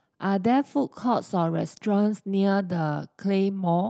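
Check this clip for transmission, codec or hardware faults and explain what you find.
No transmission, codec or hardware faults can be heard.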